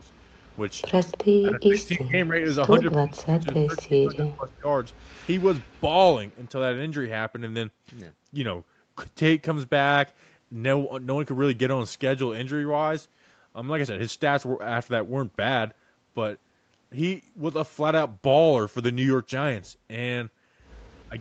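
Echo leak appears from 0.08 to 1.18 s: a delayed copy of the speech trails it by 298 ms, some 15 dB down, most likely because the far end's echo canceller let through part of what its microphone picked up from the loudspeaker.

Speech suppressed in double talk follows between 1.41 and 4.68 s. With both sides active, the canceller likely mistook the talker for echo and turned everything down, so the speech dips in pieces, by as much as 40 dB, totalling about two seconds.

Echo leak returns from 2.91 to 3.83 s, again 298 ms late and some 15 dB down, then from 4.89 to 6.5 s much fainter, roughly 30 dB under the speech. A last faint scrap, around 40 dB down, comes at 21.0 s.

Speech suppressed in double talk recurs from 21.08 to 21.19 s, a brief dip of roughly 20 dB lasting about a tenth of a second.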